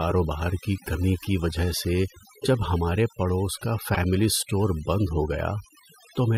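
From the start, the speech has overdone noise removal: the noise reducer was pushed so hard that it cuts whole frequency bands whenever they sit near its noise estimate. The background drops and breaks up into little twinkling specks, and the quieter parts of the voice get cut too.

At 3.94 to 3.98 s, right after "ہمارے پڑوس کا" and before "اسٹور بند ہو", there's a corrupt frame decoded. Damaged bits in what sounds like a couple of compressed frames were played anyway, so energy lands at the wrong frequencies as a short, fairly loud glitch.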